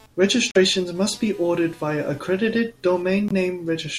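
From the start and through the whole clip, computer activity noise sits under the speech as a faint buzzing or chirping, roughly 30 dB below the speech. It pulses at around 200 times per second and follows the computer's load rather than the speech, because processor or graphics activity is disturbing the ground that the audio circuit shares. On a spectrogram it appears as a thin ladder of harmonics near 200 Hz and its multiples, present even between phrases.

At 0.51 s the speech drops out completely until 0.57 s, and a shorter hole follows from 3.28 to 3.32 s. This is a Bluetooth dropout, likely caused by audio packets reaching the headphones too late and being discarded. The gap lengths fit two lost frames in the first case and one in the second. The speech resumes where it would have been had it kept playing. The waveform shows flat, near-zero stretches, and the spectrogram shows clean vertical blank bands.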